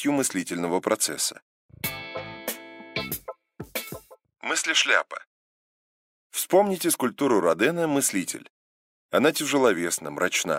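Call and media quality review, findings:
No faults found on this one; nothing in the audio calls for a ticket entry.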